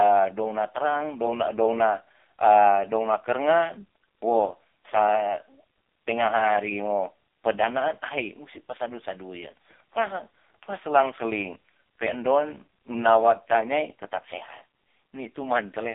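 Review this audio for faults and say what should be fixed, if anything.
Thin, buzzy and synthetic-sounding speech runs the whole way through, confined to roughly 250 Hz to 3.6 kHz with nothing above 3.6 kHz. That is heavy AMR narrowband mobile codec damage: the voice is rebuilt from a vocal-tract model and sparse pulses, and the coarseness points to a very low mode, around 5.15 kbps. Prevent it by capturing over a wideband or uncompressed path, or using a higher-rate codec mode.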